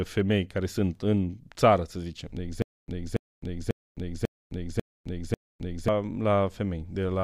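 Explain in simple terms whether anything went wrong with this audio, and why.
Between 2.62 and 5.88 s the speech breaks into a stutter with silent gaps: the same short snippet, about 0.28 s long, plays six times, each followed by about 0.26 s of dead silence, so it returns steadily every 0.54 s. The likely cause is a stalled player replaying its last piece on each retry. Unlike a plain dropout, which is only a hole, the sound repeats, and whatever should have played there is lost.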